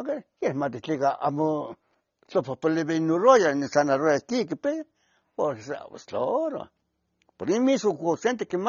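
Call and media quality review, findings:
AAC compression throughout the clip. Speech dull and band-limited, nothing above 6.9 kHz. Sibilants smeared and fizzy. Warbling texture on sustained sounds, plainly audible. Likely an AAC-LC encode at low bitrate. Damage fits roughly 24 kbps. Mechanism: the encoder drops the cut-off to save bits, then quantises the remaining frequency lines coarsely against its hearing model. This leaves gaps in the spectrum and unstable high-frequency detail.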